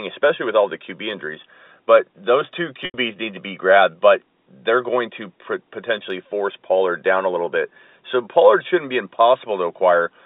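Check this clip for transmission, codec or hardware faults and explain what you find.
One transmission fault is audible in this telephone-band speech, which is carried at 250 Hz to 3.7 kHz by G.711 telephone coding: packet loss with pitch repetition from 2.85 to 2.94 s. About 90 ms went missing, which fits three lost 30 ms packets. The receiver looped the last pitch period, giving a brief buzzy hold that fades into silence before speech cross-fades back. A plain dropout would cut straight to silence without that buzz.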